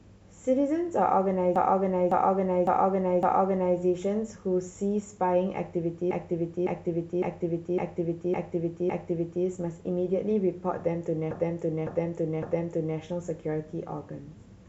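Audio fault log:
1.56–3.79 s, 6.11–9.45 s, 11.31–12.98 s: repeated frames. A 0.56 s block replays 4, 6 and 3 extra times, a stutter, lengthening the audio by 2.2, 3.3 and 1.7 s. The block length fits six compressed frames sent again.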